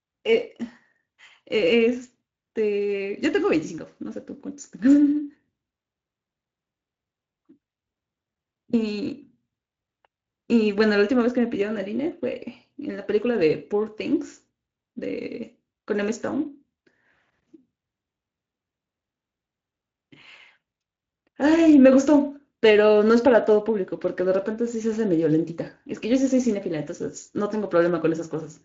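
No technical faults turn up anywhere in the recording. The speech carries the mild texture of a Speex encode at a fairly generous setting, and the audio band stops at about 7.5 kHz.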